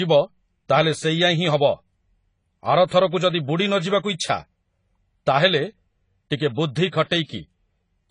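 Speech with a layered, smeared lossy quality running through the whole recording, likely from transcoding between lossy codecs. The sound points to an MP3 encode near 48 kbit/s later re-encoded as AAC-LC around 24 kbit/s, so the artefacts of both are heard together. On a spectrogram, nothing shows above a hard 10 kHz ceiling, with patchy, blotchy detail below it.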